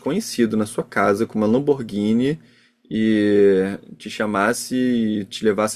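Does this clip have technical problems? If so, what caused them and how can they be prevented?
No, the speech signal shows no technical faults anywhere in the clip, so there is nothing to trace to a cause or to prevent.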